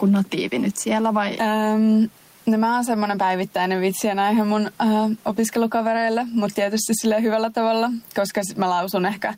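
Gain pumping runs throughout the speech: the background swells between phrases and ducks by around 10 dB under loud sounds, likely from excessive gain with a fast limiter.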